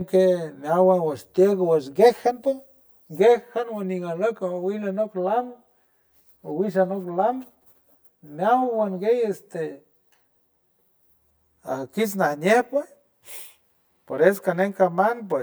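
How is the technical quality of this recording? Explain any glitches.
The recording has one technical fault, present from start to finish: channel delay (comb filtering). One channel of the speech arrives around 10 ms behind the other, and when the two are summed to mono, everything they share cancels at evenly spaced frequencies, starting near 50 Hz and repeating roughly every 100 Hz. Those fixed notches carve a regular pattern through the whole spectrum, so the speech sounds hollow and phasey, with a thinned tone that never changes.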